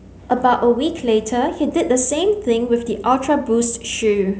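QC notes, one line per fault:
No faults found in this speech clip. Nothing heard in it calls for a note.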